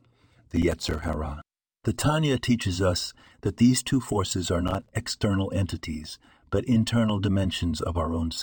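From 0.56 to 1.14 s and again from 4.68 to 4.92 s, the speech tears into processor overload crackle. Many buffers of roughly 5 ms each miss their deadline and are left silent. Unlike a single dropout, it comes as a rapid, gritty run of tiny gaps.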